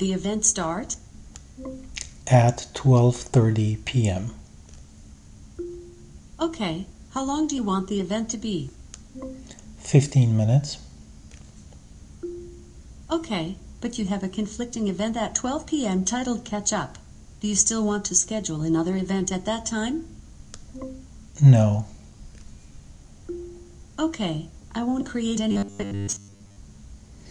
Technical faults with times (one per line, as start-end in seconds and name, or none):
25.51-26.56 robotic sound from repeated short buffers